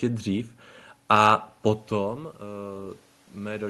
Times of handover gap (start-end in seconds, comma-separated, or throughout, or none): none